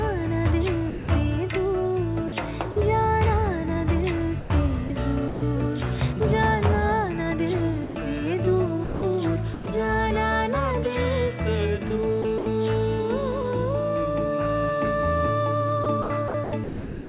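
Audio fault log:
0.90–1.08 s, 7.84–7.96 s, 8.84–9.02 s and 9.54–9.66 s: sound dropped by the voice detector. The sender's voice detector likely classed the sound as background and stopped transmitting, so the receiver filled each gap with comfort noise for 180 ms, 120 ms, 180 ms and 120 ms respectively. Each time, the sound gives way to steady noise or near silence, then returns once the detector triggers again.
2.28–2.76 s, 4.40–5.42 s, 12.22–12.46 s and 15.84 s to the end: sound chopped by the voice detector. Within each stretch the detector likely switched between sending and muting more than once, replacing pieces of the sound with comfort noise totalling 80 ms, 260 ms, 100 ms and 690 ms. Quieter parts drop out, so the sound turns choppy, all within the band below 4 kHz that the call codec passes.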